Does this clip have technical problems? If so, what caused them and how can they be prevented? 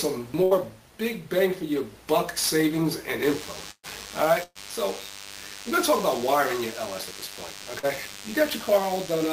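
Yes. Burst of packet loss at 0.43–0.54 s, 3.71–3.86 s and 4.43–4.58 s: about 80, 120 and 120 ms went missing, and the receiver stretched and faded the last sound, briefly dropping to silence in the later two. Prevent it with a wired or less congested network connection and a larger jitter buffer.

DECT cordless phone buzz from 3.23 s to the end: a nearby DECT handset or base pulses every 10 ms, giving a thin 100 Hz buzz roughly 15 dB below the sound. Prevent it by keeping DECT equipment away from the microphone and audio cables.

Short concealed packet loss at 7.79 s: about 40 ms never arrived, and the decoder filled it by extending the previous sound, leaving a brief smear. Prevent it with a more stable network path and forward error correction.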